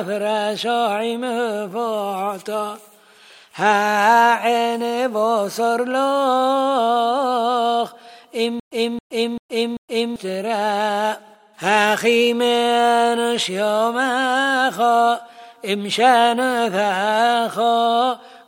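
From 8.60 to 10.16 s there's a stutter with silent gaps. The same short fragment, about 271 ms long, plays four times in a row, each time followed by roughly 119 ms of dead digital silence, so it ticks along at an even 390 ms cycle. It's most likely the player or stream stalling and replaying its last chunk on every retry before running dry, and whatever audio belonged in that stretch never comes through.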